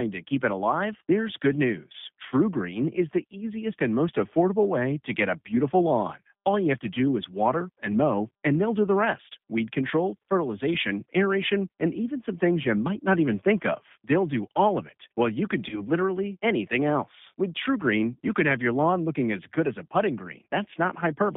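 Speech squeezed through the G.729 codec at 8 kbit/s the whole way: everything sits between roughly 150 Hz and 3.6 kHz, with that slightly rough, synthetic edge. Around 15.69 to 15.82 s, right after "it while you can" and before "literally anything else", there's VoIP packet loss concealed by the speech codec. About 30 ms went missing, which fits a single dropped packet, and the decoder's guessed fill plus its recovery smear roughly 130 ms into a buzzy or noisy, fading blur.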